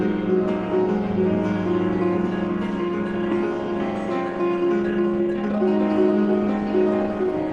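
At 3.31 to 3.33 s the music skips ahead. About a second was dropped in transit or by an overflowing jitter buffer, so the two sides join almost directly with no gap.

From 4.40 to 5.62 s a jitter buffer speed-up plays the music at 134% speed. The receiver cut short pitch-period slices, removing about 0.4 s. Pitch stays put, but the tempo rushes.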